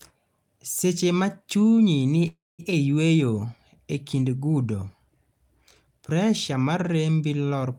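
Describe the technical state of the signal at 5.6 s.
At 5.6 s the speech signal is intact, with no audible fault at that point.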